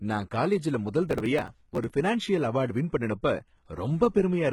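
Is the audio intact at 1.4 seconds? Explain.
No. The moment at 1.4 s falls inside a burst of processor overload crackle running from 1.09 to 1.92 s. The processor repeatedly failed to deliver its tiny audio blocks on time, each about 3 ms long, and some forty of them were skipped outright rather than held. Each skip butts two pieces of speech together with a hard edge, so the passage tears and crackles. On a waveform this shows as many small jumps and discontinuities. A spectrogram shows a dense run of thin vertical broadband lines across the whole frequency range.

The same moment also carries heavy codec damage that runs through the whole clip, likely from HE-AAC compression at a very low bitrate, around 16 kbps. Only the lower band is truly coded, and the treble is rebuilt by copying lower bands upward, so s sounds come out gritty and lispy with a metallic edge. A spectrogram would show a hard ceiling with nothing above 11.8 kHz. 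Below that ceiling, the upper bands look like repeated, smeared copies of the lower bands, and their harmonics don't line up across the crossover.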